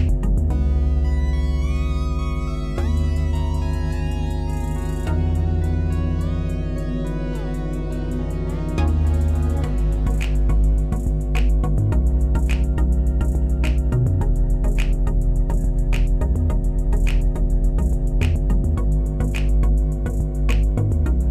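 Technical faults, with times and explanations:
Throughout, mains hum: a steady low drone at 50 Hz, with some low harmonics, sits only a few decibels under the sound itself. A ground loop or nearby transformer is coupling the power-line frequency into the signal path, so it never lets up.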